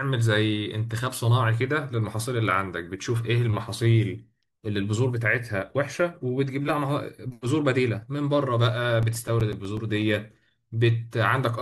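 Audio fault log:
8.90–10.02 s: CD scratch ticks. Ten short ticks arrive at a steady rate of about nine a second. Each is a brief click or tiny gap in the speech, the longest only a few milliseconds. A scratch on the disc passes the laser once per turn. Each pass damages more data than error correction can rebuild. The player then fills in or mutes those samples, and each patched spot is heard as a tick.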